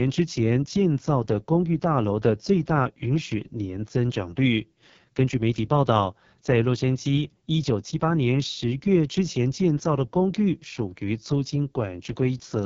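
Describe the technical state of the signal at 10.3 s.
At 10.3 s the speech carries the AMR wideband (HD Voice) codec, present across the whole clip. The heavy, rough and raspy coding, with the vocal tract model starved of pulses, fits the lowest 6.6 kbit/s mode. Nothing is audible above about 7.2 kHz.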